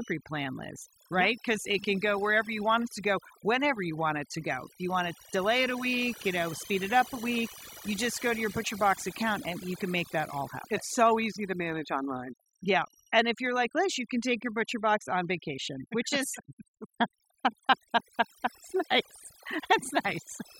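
A switching supply whistle runs from start to finish: a high tone around 3 kHz that wanders between about 2.6 and 3.1 kHz, sitting roughly 20 dB below the speech. A switching power supply cycling at an audible rate, or beating against another supply, leaks this tone into the audio path. Unlike mains hum, which is low and locked to 50 or 60 Hz and its harmonics, this is a single high-pitched tone whose pitch shifts rather than holding fixed.

Overdone noise removal is present throughout as well. A noise reduction stage set too aggressively pulls individual frequency bands down hard whenever they resemble its noise estimate, so the background breaks into twinkling, warbling specks, and quieter parts of the speech get carved away with it. What separates this from low-bitrate codec artefacts is that the fluttering specks live in the gaps and the noise floor, tracking the background rather than smearing the whole signal evenly.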